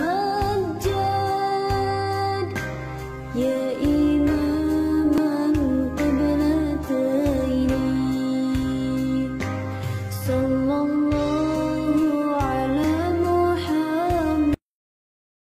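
At 5.18 s and 12.84 s the sound jumps, skipping roughly 10 ms then 20 ms, likely a dropped buffer (overrun), with no silent gap, unlike an underrun.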